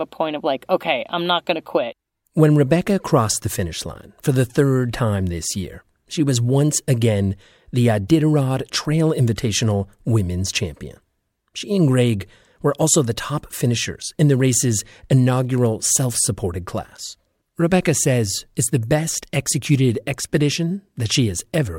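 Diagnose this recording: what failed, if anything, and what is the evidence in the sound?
Nothing in the signal chain failed: the speech arrives with continuous, steady level and no audible breaks, distortion, or disturbances at any stage from capture to playback.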